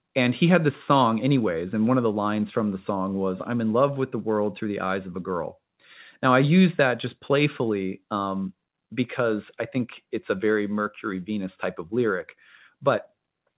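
Speech, with no technical faults to be heard.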